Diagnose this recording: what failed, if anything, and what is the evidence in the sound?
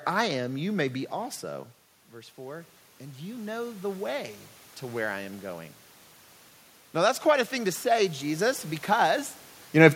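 Call processing: automatic gain rising. The talker moves away near 1.5 s. From 1.47 to 5.49 s, gain climbs about 10 dB. Voice and room noise swell together.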